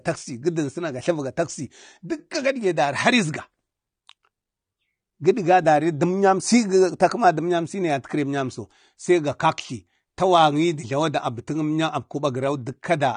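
Speech with AAC compression damage running the whole way through: the top end stops dead at about 9.7 kHz, and sibilants and sustained vowels take on a smeared, fizzy texture. That is likely from AAC-LC encoding at a low bitrate, fitting roughly 32 kbps.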